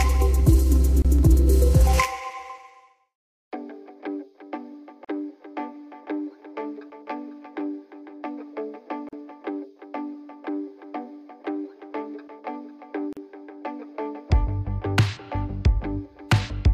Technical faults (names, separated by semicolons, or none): gap at a join of encoded pieces